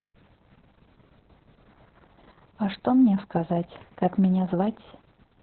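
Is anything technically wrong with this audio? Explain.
Yes. Throughout the speech there is Opus voice compression. The encoder was held to its linear-prediction speech coder with a narrow band, which points to a very low bitrate of around 6 kbps, possibly with long frames. It discarded everything above about 4.3 kHz and coded the excitation only coarsely. As a result, the damage is heavy: the voice sounds muffled and telephone-thin, with a hoarse, slightly robotic, buzzy quality in place of natural breathiness and detail.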